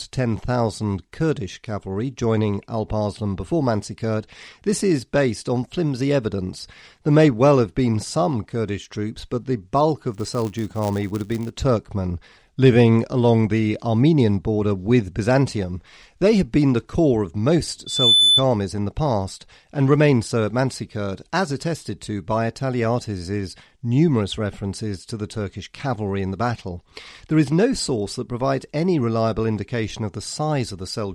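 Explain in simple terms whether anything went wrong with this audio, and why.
Two things go wrong in this speech clip.

From 10.11 to 11.52 s, just after "troops but the bulk", a filter restarted on every block adds a rough buzz at 100 ticks per second. Each tick comes from the processing starting fresh from silence at each block, which suggests blocks of about 10 ms. Unlike mains hum, it rises and falls with the speech.

From 17.86 to 18.44 s, between "the core of most" and "in the past and", there is a loudspeaker feedback squeal at 3.5 kHz. A microphone is picking up its own loudspeaker. Unlike a steady beep, the tone swells by itself over about a third of a second until it is louder than the speech.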